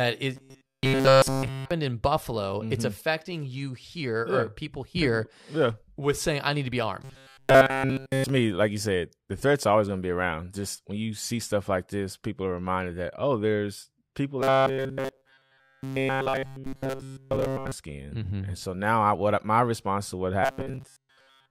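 Robotic sound from repeated short buffers at 0.35–1.71 s, 7.04–8.29 s, 14.42–17.72 s and 20.43–21.51 s, likely from a roughly 7.5 ms slice being looped while fresh audio went missing. It imposes a fixed 134 Hz metallic buzz over nearly all of the speech, and over most of it in the last stretch.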